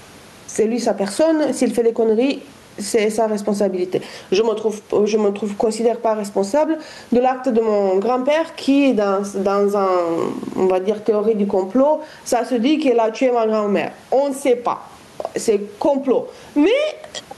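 Gain pumping runs through the whole of this speech clip. The likely cause is input gain set far too high, with a fast compressor or limiter clamping down on each loud syllable and releasing in the pauses. The level swings by roughly 15 dB, leaving the speech flattened and squeezed, while the room noise sits about 41 dB below the speech.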